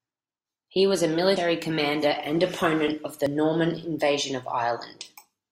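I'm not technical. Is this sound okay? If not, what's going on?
No. There is audio missing between chunks, at 1.36 and 3.26 seconds. At each point, roughly a tenth of a second of speech drops out, and the sound on either side is butted together with no gap, so it jumps forward. The two skips are 1.9 seconds apart. That regular spacing suggests the likely cause is a recorder handling sound in two-second blocks and losing a sliver each time it switches blocks.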